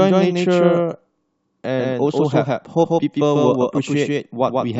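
Throughout the speech, a doubled audio track repeats every sound about 150 ms later at roughly equal loudness, likely from a second capture path. The waveform shows each onset twice, with no decaying tail.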